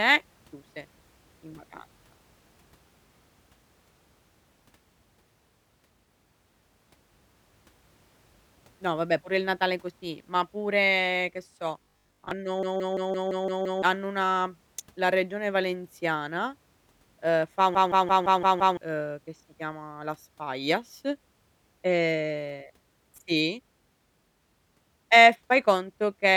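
Just after "ma pure che so", from 11.83 to 12.31 s, the speech turns into a rigid, metallic buzz pitched at 50 Hz that still roughly tracks the syllables. This is robotic sound from repeated short buffers, likely caused by audio arriving too seldom. The playback keeps repeating a 20 ms slice, which sets the 50 Hz pitch, and most of the real audio in that stretch is skipped.

From 12.63 to 13.82 s, just before "hanno una la regione", one 170.67 ms fragment repeats exactly 7 times at 5.86 Hz, giving a machine-gun stutter. The same thing happens from 17.75 to 18.77 s, between "uhm fa" and "uhm che si chiama", this time with 6 repeats. Both are a system hang loop. The computer or driver stalled while the sound hardware kept cycling through a ring buffer whose length fits 8192 samples. Roughly a second of audio is lost each time.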